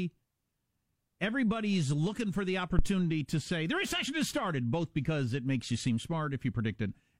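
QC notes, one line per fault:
2.79 to 2.91 s, phantom power thump: a deep low-frequency thump peaking at about -11 dBFS, decaying in roughly 26 ms as a supply voltage step passes through the coupling capacitors. Unlike a breath plosive, it is a single electrical step with no airy onset.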